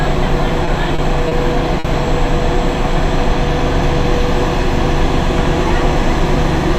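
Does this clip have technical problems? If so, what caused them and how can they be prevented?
Yes. There are four short stalls from late packets, at 0.65–0.69 s, 0.95–1.00 s, 1.28–1.33 s and 1.79–1.86 s. Each time, a packet missed its playout deadline and the jitter buffer ran dry, so the receiver held the last bit of sound for 20, 30, 30 and 50 ms. It then resumed exactly where it stopped, so nothing is lost. These moments come out as brief drawn-out smears with a faint buzz or dip, and each one pushes the rest of the audio slightly later. A deeper or adaptive jitter buffer, together with a steadier network path, would absorb delay spikes of up to about 50 ms before they reach playback.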